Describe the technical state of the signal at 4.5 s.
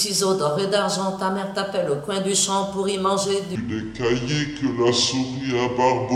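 At 4.5 s the audio sits inside a section at the wrong speed, running from 3.55 s to the end at 6.16 s. It plays at 0.661 times its proper rate. Pitch drops by roughly seven semitones, so everything sounds deep and slow. A mismatched playback clock is the likely cause.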